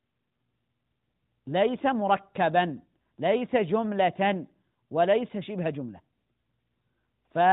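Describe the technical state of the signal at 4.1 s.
At 4.1 s the speech is intact with no fault, carried by the AMR narrowband mobile codec, whose band stops at 4 kHz and gives it the familiar telephone quality.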